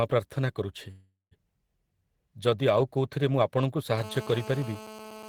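At 0.91 s the speech stalls. The last sound carries on as a fading buzzy hiss, then drops to silence for about 170 ms, and at 1.34 s the talker picks up exactly where they stopped. That's a call audio freeze, likely from packets getting held up in transit so the jitter buffer ran dry. Roughly 0.4 s got filled in, nothing was lost, and everything after lands that much later.

From 3.98 s to the end there's GSM phone buzz: a hard, raspy drone at 217 Hz with a dense stack of harmonics, sitting about 17 dB under the speech and having nothing to do with it. A nearby 2G handset transmitting in bursts gets its radio pulses rectified by the audio circuitry. It stays steady the whole way, which fits a phone on an active call rather than one doing a data transfer.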